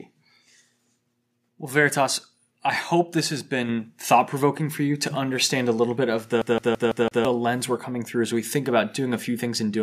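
At 3.69 s the microphone volume steps up: the speech and the background noise behind it jump together by about 5 dB in a single step. The change lands abruptly rather than ramping, which points to automatic gain control in the call software judging the input too quiet and raising the device's capture volume at once. Because both voice and room sound rise together, the fault is in the input level, not the talker moving closer.

From 6.42 s to 7.25 s the audio behaves like a CD stuck on one turn. A segment of about 0.17 s plays five times in a row, each repeat separated by a brief mute where the playback jumps back. The result is a rapid, perfectly regular stutter. This is the signature of a scratch knocking the laser back one track at the same point on every rotation, so the identical fragment keeps returning until the player moves past it.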